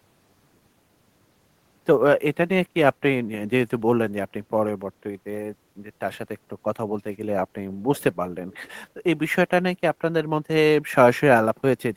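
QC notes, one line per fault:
7.96–8.03 s and 8.50–8.69 s, echo leak: Brief, faint scraps of the speech return about 0.5 s late, roughly 25 to 30 dB below it. The likely cause is a far-end loudspeaker whose echo canceller let part of its microphone pickup slip back.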